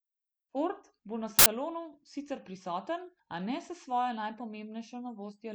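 File tags played as audio break into this speech clip from 1.39 to 1.46 s, just after "bo na": an embedded cover picture, compressed data, is read as samples, producing a hard-edged burst of very loud white noise lasting about 70 ms before the speech resumes.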